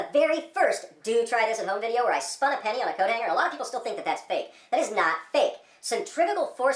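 From start to finish the clip suffers from a wrong sample rate: the samples are replayed faster than they were captured, with no conversion in between. Everything runs 1.38 times too fast and sits about 5.55 semitones high, so the sound is hurried and chipmunk-bright. The ratio fits material recorded at 16 kHz being played at 22 kHz. On a spectrogram every component is shifted up by that factor. Harmonics sit farther apart, and the top of the band reaches about 11 kHz instead of 8 kHz. On the waveform, events are squeezed closer together in time.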